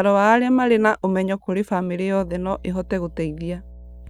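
From 2.20 s, right after "na ũmenyo kũrĩ bamĩrĩ", mains hum sets in and continues to the end: power-line interference, probably a ground loop, adds a steady 60 Hz drone roughly 20 dB below the speech. A spectrogram shows a flat horizontal line at 60 Hz with faint harmonics.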